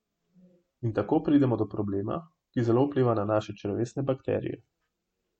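Nothing stood out on listening to this recording of speech.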